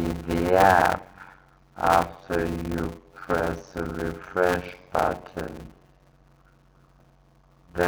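Throughout the clip there is a block size mismatch, padded with zeros. Each block is written short, which fits 256-sample writes, and the rest is silence. A buzz sits at 91.9 Hz, the block rate. The sound runs at 0.533 times speed, at roughly normal pitch.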